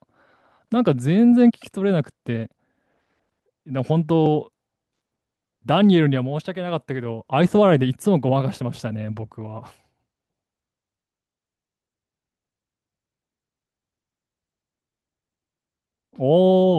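No technical faults can be heard anywhere in this speech recording; the signal stays steady and intact throughout.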